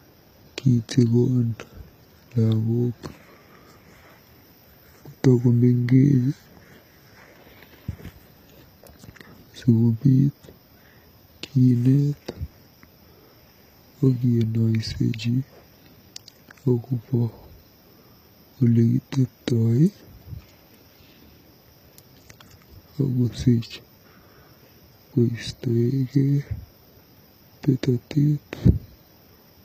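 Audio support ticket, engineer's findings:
Speech, whole clip. Nothing above 14.9 kHz, with low-bitrate coding smear in the top band. Likely low-bitrate audio saved at a high bitrate. Sound points to an HE-AAC source near 20 kbit/s re-encoded to MP3. Re-encode cannot restore removed content.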